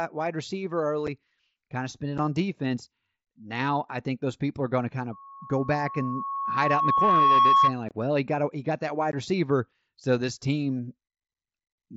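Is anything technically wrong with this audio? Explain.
Yes. Unconcealed Bluetooth headset packet loss punches abrupt gaps into the speech at 1.07, 2.18, 7.89 to 7.91 and 9.12 s. The gaps last about 7.5, 7.5, 22.5 and 15 ms, which fits one, one, three and two lost headset frames. Unlike a codec's smearing, each hole is a dropout with hard edges.

From 5.12 to 7.75 s, a loudspeaker feedback squeal appears. A single 1.1 kHz tone swells over roughly two seconds to about 10 dB above the speech as the microphone-loudspeaker loop exceeds unity gain. Its steady pitch and self-sustaining growth set it apart from background noise. The mSBC link's light graininess stays in the background.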